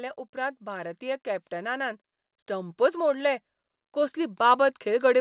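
Automatic gain rising affects this speech recording from 0.32 s to the end at about 5.2 s. The level control judged the input too quiet and kept raising its gain, so voice and background noise swell together over several seconds. The narrowband call path, with nothing above 4 kHz, points to G.711 telephony.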